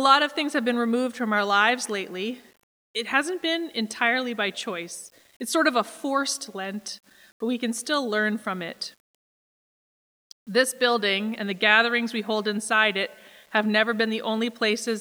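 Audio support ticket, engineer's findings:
Grainy distortion across the whole speech clip, start to end. Quiet passages and word tails sound gritty. The faintest decays sputter between steps or drop to silence. Error level sits roughly 35 dB below the signal and moves with it. Likely cause: low bit depth without dither at the bit-depth reduction or export stage, with samples rounded to coarse steps. The grain level fits roughly a 9-bit word. The error stays correlated with the signal because nothing randomises the rounding.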